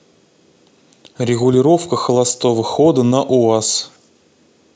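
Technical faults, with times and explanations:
No technical faults are audible in this speech recording.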